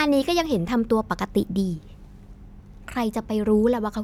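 Nothing goes wrong anywhere in this bit of speech, so there's no technical fault to point out.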